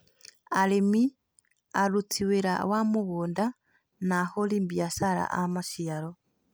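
Listening to this speech recording, nothing stood out as a technical problem at any point.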